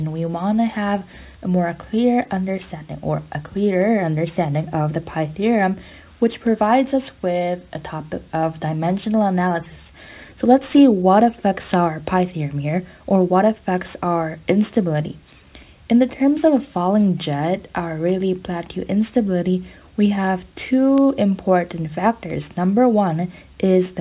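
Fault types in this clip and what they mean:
Aliasing: present throughout. Content above about 4 kHz, which fits a rate drop from 48 kHz to 8 kHz with no anti-alias filter, folds back below that edge at unrelated pitches, roughly 30 dB under the signal. High, hissy sounds turn gritty and metallic, and energy runs hard up to 4 kHz. A plain low-pass or narrowband limit would sound dull and clean instead, without this added false tonal grit.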